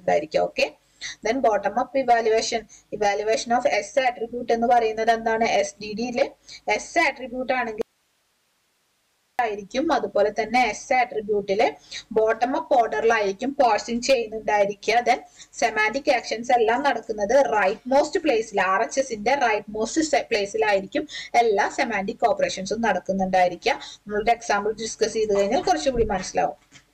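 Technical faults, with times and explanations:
7.82–9.39 s, audio dropout to a faint residue: sound cuts abruptly for 1.57 s, leaving hiss about 45 dB down, likely a lost input with the downstream path live.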